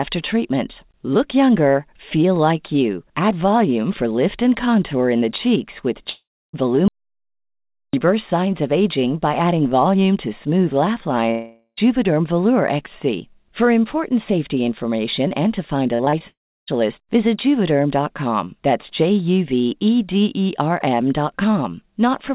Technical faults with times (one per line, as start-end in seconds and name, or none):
6.10-6.55 long network dropout
6.88-7.93 audio dropout to silence
11.31-11.79 long network dropout
15.95-16.22 repeated packet loss (robotic sound)
16.28-16.69 long network dropout